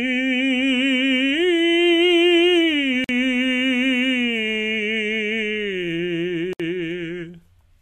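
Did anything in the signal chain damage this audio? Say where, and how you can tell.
Yes, there's a gap at a join of encoded pieces, twice: the music drops out from 3.04 to 3.09 s (about 47 ms) and again from 6.53 to 6.60 s (about 65 ms). Each silence has smeared edges, and the music resumes exactly where it stopped. That points to the codec stage. The pieces were encoded separately and spliced without trimming, so each one's encoder start-up delay and last-frame padding stayed in as dead air.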